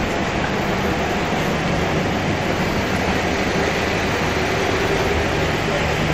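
Nothing goes wrong anywhere in this one; the sound just runs along steadily without a single glitch to point at.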